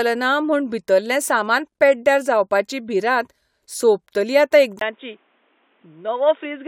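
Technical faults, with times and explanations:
4.79–6.68 s, input switched to a poorer device: after a 20 ms gap the speech turns dull and boxy, with nothing above 3.8 kHz. It is a little quieter over a faint new noise floor, likely because capture moved to a narrower-band microphone or headset profile.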